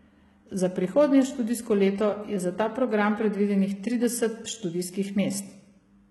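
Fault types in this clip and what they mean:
HE-AAC compression: The speech has a heavily processed top end, with nothing above 11.8 kHz, and the upper band sounds synthetic rather than natural. S sounds come out gritty and lispy, and the treble has a metallic sheen whose harmonics do not line up with the lower band. This is likely spectral band replication, where only the lower spectrum is coded and the treble is rebuilt from copied bands under a coarse envelope, consistent with a very low bitrate around 16 kbps.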